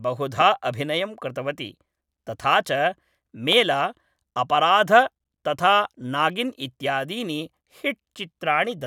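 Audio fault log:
0.41–0.43 s and 3.53–3.55 s, loud pop: a single sharp pop each time, roughly 10 dB above the speech, which carries on underneath. This is likely a sudden voltage spike. It shows as a tall, narrow waveform spike and a thin full-band vertical stripe on the spectrogram.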